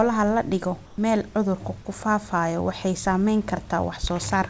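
From 0.86 to 0.98 s, a 120 ms stretch of background is replaced by comfort noise, likely because the sender's voice detector treated the gap as silence and stopped transmitting, leaving the receiver to synthesise a stand-in. The room's textured hiss gives way to a flat, featureless noise about 6 dB quieter. On a spectrogram the band turns smooth and uniformly dimmer, below the 8 kHz ceiling of the call path; the waveform shows a short, even, lower-amplitude patch.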